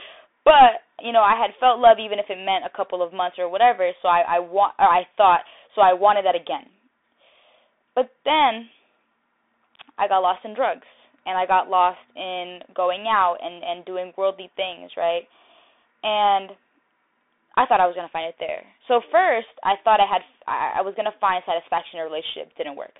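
Throughout, the speech carries Bluetooth CVSD headset codec damage. It is confined to roughly 300 Hz to 3.6 kHz, with nothing above 3.8 kHz. One-bit, adaptive-step coding, which fits a 64 kbps stream, lets loud highs outrun the step, roughening s sounds over granular hiss.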